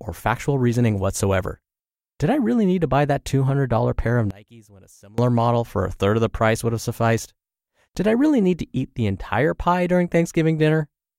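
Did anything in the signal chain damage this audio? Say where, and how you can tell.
Yes. From 4.31 to 5.18 s the speech drops by about 26 dB to a faint residue, the signature of one channel inverted, likely a polarity flip in the analogue wiring, so the mono sum cancels. The waveform collapses, and the spectrogram fades across the band.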